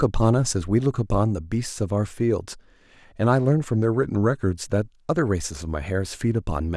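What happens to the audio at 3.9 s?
At 3.9 s the speech sits inside a drift correction step running from 3.74 to 4.52 s. Playback slows by about 6% and pitch drops about a semitone, likely a clock-matching resampler adjusting its buffer. Unlike gradual wow, the shift is abrupt, holds steady, then snaps back.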